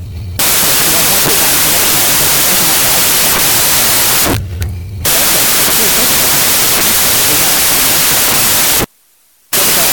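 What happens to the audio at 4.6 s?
Loud noise swamps the speech, which runs fast and high at 1.5 times speed throughout: a wrong sample width, 16-bit data read as packed 24-bit, mismatching bytes.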